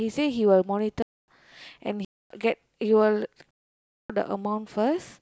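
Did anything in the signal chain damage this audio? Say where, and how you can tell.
Yes, at the driver or buffer stage: blocks of digital silence at 1.02–1.28, 2.05–2.30 and 3.51–4.10 s cut the speech abruptly. The two 256 ms gaps fit a missed 4096-sample buffer.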